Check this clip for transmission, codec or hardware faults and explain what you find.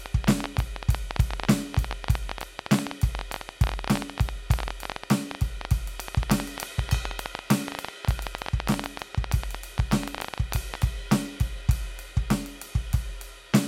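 There is one fault, a train of clicks. It runs from about 0.06 s to 10.83 s, through most of the music. Roughly 150 clicks arrive at about 13.5 per second, with uneven spacing. Each is a short pulse of much the same shape, standing around 20 dB above the music. Something is injecting repeated impulses into the path, likely electrical interference from nearby equipment or a faulty connection or power supply. It sounds like an irregular ticking or popping laid over the music.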